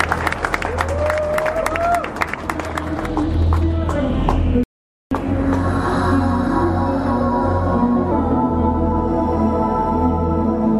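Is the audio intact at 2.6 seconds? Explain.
Yes, at 2.6 seconds the audio is intact, with no dropout, click, distortion or other fault at that moment.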